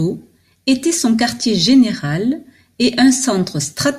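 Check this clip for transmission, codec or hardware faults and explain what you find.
No transmission, codec or hardware faults turn up when checking this clip.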